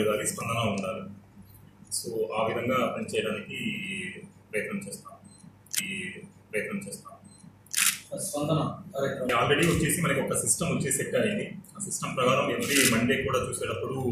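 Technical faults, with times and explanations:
5.78–7.78 s, stream segment repeated: the player fetched or queued the same two-second segment twice, so playback jumps back and replays it. The passage is heard again, with a small blip at the jump, and the total running time is extended by 2 s.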